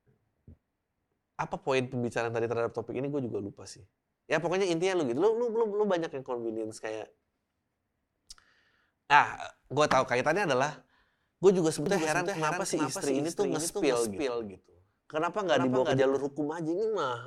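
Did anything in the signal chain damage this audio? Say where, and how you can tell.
Yes: a doubled audio track from 11.86 to 16.02 s, with a dry copy about 5 dB quieter trailing roughly 0.4 s behind, likely from a second, slower capture path.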